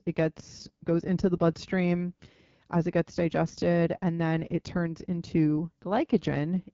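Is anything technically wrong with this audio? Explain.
Yes. Throughout the speech the AMR wideband (HD Voice) codec damage is plainly audible. The codec models the voice below 6.4 kHz as pulses driving a vocal-tract filter and fills the band up to 7 kHz with shaped noise. The rough, raspy texture fits one of its lowest rates, around 8.85 kbit/s. On a spectrogram, everything above about 7.4 kHz is empty, the top band looks like diffuse noise, and the harmonics appear smeared and grainy.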